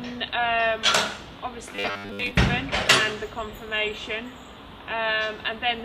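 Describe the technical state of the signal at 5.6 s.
At 5.6 s the signal is intact, with no audible technical fault at that moment.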